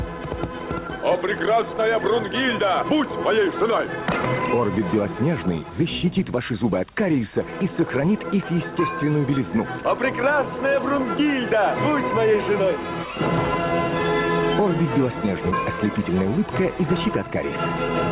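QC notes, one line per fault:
No faults to note.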